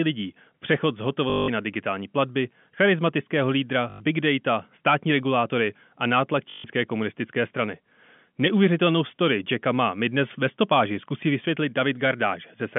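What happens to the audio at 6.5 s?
Right after "státní regulátory a nátlak", from 6.5 to 6.64 s, there's packet loss with the last packet repeated: 140 ms of audio gets filled by looping one packet, giving a buzzy robotic stutter around 50 Hz (fits 20 ms packets) before "komunistické strany".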